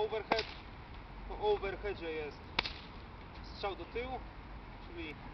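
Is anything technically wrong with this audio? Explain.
Yes. From 1.11 s to 5.11 s there is a regular click about every 1.33 s, about four in all. These are clock drift buffer slips, likely from two devices whose clocks differ by around 150 ppm, so a buffer overruns or runs dry and a few samples are skipped or repeated.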